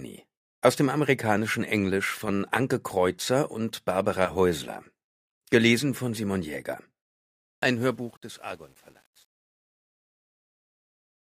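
From 7.42 s the fade-out turns gritty, worst after 8.0 s. That is truncation distortion on a fade, with no dither, which fits a 9-bit stage.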